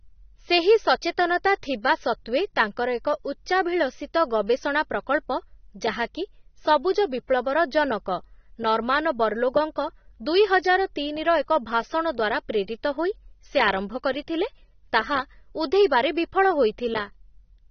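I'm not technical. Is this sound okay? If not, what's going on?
No. AAC compression damage runs through the whole recording, from start to finish, and is most likely the cause of what you hear. The speech sounds dull and muffled because everything above about 6.3 kHz has been removed. That is the range that gives s-sounds and breaths their crispness. To make the file small, the encoder keeps only what it judges most audible. The rest gets rough, so sustained sounds pick up a swirly, fizzy texture.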